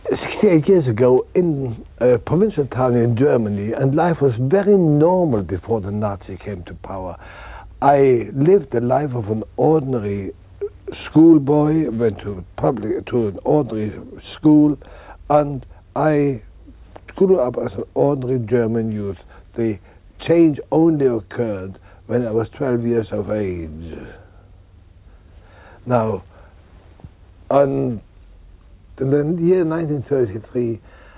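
No technical faults can be heard anywhere in the audio. There is nothing here that calls for a time or a cause to be flagged.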